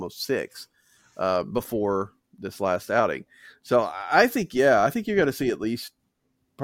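No technical faults can be heard anywhere in this speech recording. Nothing in the audio points to a problem in how it was captured, processed or played back.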